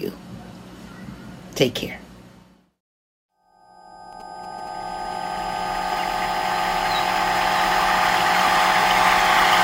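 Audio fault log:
4.13–5.54 s, GSM signalling bursts: a nearby 2G phone exchanging signalling traffic radiates short radio bursts that the audio circuit rectifies, so a galloping dit-dit-dit of brief buzzes at about 217 Hz sits roughly 25 dB below the sound.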